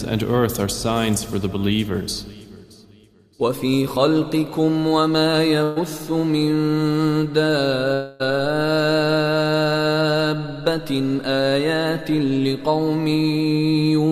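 At 5.63 s a burst of packet loss interrupts the audio for about 0.15 s. Roughly 120 ms of the stream never arrives, and the receiver covers the gap by extending the last sound it had for about 125 ms, letting it fade as it goes. The result is a brief held buzz or hiss that never drops to silence before the audio picks up again, with that short stretch skipped.

From 7.94 s to 8.22 s there is a longer concealed gap that likely comes from a long network dropout. About 260 ms of audio is lost, and the receiver stretches the last sound over roughly 256 ms, fading it throughout. Unlike the earlier burst, this fill lasts more than a quarter of a second, so it sounds like a drawn-out, decaying tail rather than a momentary stutter. The fade never reaches silence before the audio resumes further on, missing the lost portion.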